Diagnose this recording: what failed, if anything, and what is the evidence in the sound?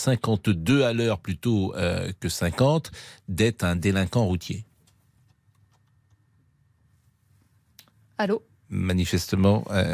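Nothing failed; no fault is audible anywhere.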